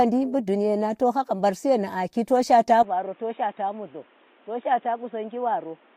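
At 2.83 s, right after "to shaata", the speech abruptly turns dull and boxy, drops roughly 10 dB, and gains a faint new noise floor; the likely cause is an input switched to a poorer device. A spectrogram shows everything above 3.8 kHz vanishing, with no gap at the switch.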